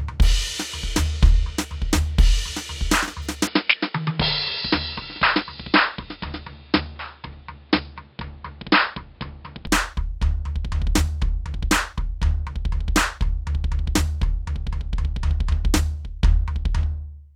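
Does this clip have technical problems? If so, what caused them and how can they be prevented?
Yes. From 3.47 s to 9.67 s the music turns dull and boxy, with nothing above 5.2 kHz, a drop of roughly 5 dB and a new noise floor about 35 dB down, then clears. This is likely an input switched to a poorer device, with no gap at either switch. Locking the recording input to a fixed device prevents it.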